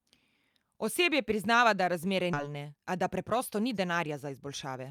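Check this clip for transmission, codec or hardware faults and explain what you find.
Two kinds of fault are audible: one skip ahead and two stretches of jitter buffer speed-up.

At 2.33 to 2.35 s, just after "priznava da razmere", there is a skip ahead. About 0.7 s of speech was dropped while later audio was already queued. Playback jumps forward with no filler. The two sides are butted together, so speech simply resumes further on.

Jitter buffer speed-up follows at 2.43 to 3.40 s and again at 4.29 to 4.90 s. The buffer held more audio than it wanted. It trimmed short pitch-period slices repeatedly, removing roughly 70 ms and then 50 ms. The speech runs 6% and then 8% fast at unchanged pitch and sounds hurried.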